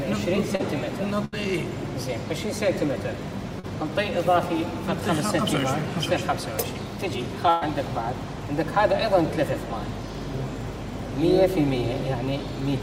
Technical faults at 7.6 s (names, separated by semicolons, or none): burst of packet loss